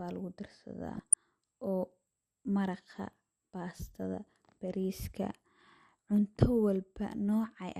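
From the start the speech sounds dull and granular, with upper bands flickering; this is likely MP2 compression, and the damage fits a bitrate near 80 kbps. From 0.95 to 1.14 s, DAB burbling: sparse bit errors corrupt a short run of MP2 frames, putting short blips of noise into single sub-bands.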